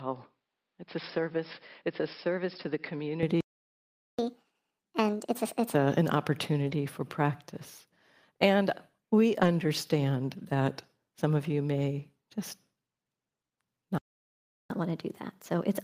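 Right from the start, up to about 3.23 s, the speech sounds dull and boxy, which is most likely the input switched to a poorer device. The level sits about 5 dB lower, and the background noise is only about 50 dB under the signal. At 3.23 s it opens up again with no gap at the switch, the way it does when a narrower-band mic or headset call profile drops out and the better input comes back.

Then at 3.41 s the sound just stops for about 780 ms, until 4.19 s. That's a playback stall, likely the player running dry or its thread getting blocked, so nothing came out until it recovered.

Straight after, from 4.19 to 5.75 s, you get the catch-up at higher speed. Playback runs at 1.5 times normal, so the pitch jumps roughly 7 semitones while the player burns through its backlog. It settles back to normal pitch just before "a an".

Between "a an" and "for practice", at 6.67 s, there's a brief rough, noisy patch of about 40 ms. 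Another 40 ms patch turns up at 9.41 s. Both are lost packets rebuilt from error correction. The decoder played the low-bitrate copies carried in the following packets, so there's no gap, but those frames come out grainier, and the duration fits two lost packets each time.

The second playback stall runs from 13.98 to 14.70 s, about 720 ms of silence, again likely a starved or blocked player.

A gentler catch-up follows from 14.70 s to the end, at 1.15 times speed. The pitch rises by roughly 2 semitones, a smaller lift than the 7-semitone jump from earlier.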